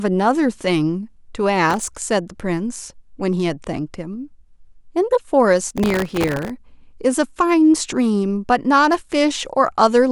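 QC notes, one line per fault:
1.70–1.97 s: processor overload crackle. A short burst of gritty crackle rides on the speech as the processor misses a run of audio deadlines. Each miss repeats a sliver of old audio with hard edges, and the very short slices, well under a millisecond each, blur into a fine tearing texture rather than distinct clicks.
5.69–6.50 s: processor overload crackle. A longer episode of the same tearing crackle, lasting about 0.8 s, with many more buffers missed. It stops once the load clears.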